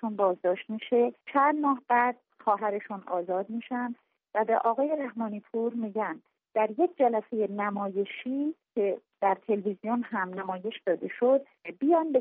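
No technical faults are audible at any point in the audio.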